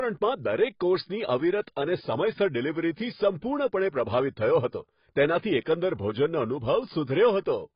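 A speech recording carrying heavy AAC compression damage from start to finish, likely from AAC-LC at a low bitrate, with the sound fitting roughly 16 kbps. Nothing survives above about 5.1 kHz, so the speech is dull, and coarse quantisation across the remaining band leaves a smeared, warbling texture. At 2.96 s there is a brief pre-echo: a sharp onset there is preceded by about 19 ms of hiss, because the codec's quantisation noise is spread across the whole transform block, including the quiet part before the attack, which also softens the onset itself.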